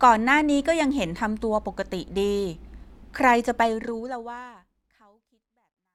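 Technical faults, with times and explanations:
No technical faults are present, so there are no times or explanations to give.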